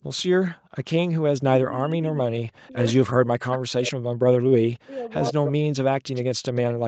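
From 1.05 to 3.97 s the voice keeps sinking and breaking up, with drops of up to around 40 dB and about two seconds lost in total. That's speech suppressed in double talk. It's likely that the far side was talking at the same time, and the echo canceller couldn't tell this talker from its own loudspeaker echo, so it pulled everything down. The same thing happens again from 4.3 to 5.87 s, costing roughly another second.

Meanwhile, faint scraps of the voice come back about 100 ms late at 2.03, 2.88 and 3.52 s, sitting around 30 to 20 dB below the speech. That's echo leak, likely from a speakerphone on one side whose canceller let some of its mic pickup slip through. It gets more obvious at 5.24 to 5.52 s, only about 10 dB down, and again at 6.14 to 6.73 s, at about 15 dB down.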